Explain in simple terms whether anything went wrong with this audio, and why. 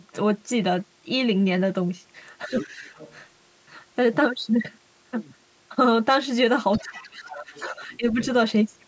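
Speech suppressed in double talk happens at 2.47 to 2.84 s, 6.81 to 7.51 s and 7.69 to 8.2 s, where the voice sinks and breaks up, most deeply in the middle stretch. Both sides were likely talking at once, and the call's echo canceller turned everything down.

Other side's voice leaking through shows up at 2.54 to 2.7 s, 2.91 to 3.15 s, 6.73 to 7.08 s and 7.29 to 7.72 s as a faint second voice underneath. Likely the far caller, playing from the loudspeaker, was not fully removed from the microphone.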